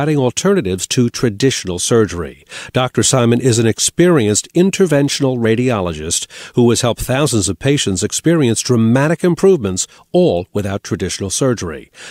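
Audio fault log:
No faults can be heard anywhere in this speech recording. There is nothing here to log against a time.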